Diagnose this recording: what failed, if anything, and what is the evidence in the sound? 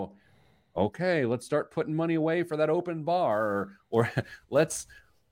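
The converter failed: sample clock jitter from 3.31 s to the end at 5.32 s. A grainy hiss rides on the speech, strongest on loud and bright sounds, gone in pauses, around 30 dB below the signal. This fits a clock wandering by a few microseconds.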